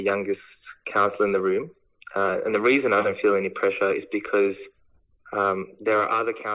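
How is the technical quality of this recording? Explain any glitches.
Nothing in the signal points to a technical fault: the level, continuity and timing all stay steady, with no dropouts, jumps or added disturbances at any point.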